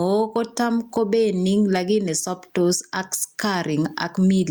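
A speech clip with gain pumping throughout: the gain ducks by around 10 dB under each loud syllable, so the level sounds squashed. The likely cause is input gain set far too high, with a fast limiter clamping peaks. On a waveform the envelope looks flattened.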